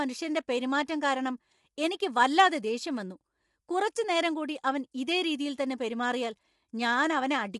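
Low-delay AAC compression runs throughout: the speech sounds rough and grainy with nothing above 11.6 kHz, likely short-frame AAC-ELD at a bitrate around 32 kbps.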